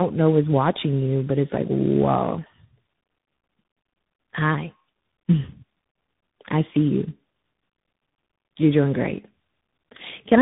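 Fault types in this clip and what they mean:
tandem speech coding: The speech was decoded and re-encoded several times, each codec compounding the last one's damage, which sounds like about four stages, one low-rate. It is rough and warbly, and a spectrogram shows nothing above 3.8 kHz and smeared, blotchy harmonics.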